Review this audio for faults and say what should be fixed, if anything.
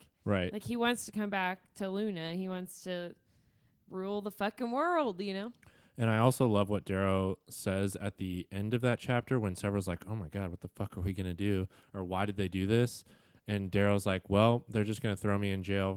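No faults; nothing needs fixing.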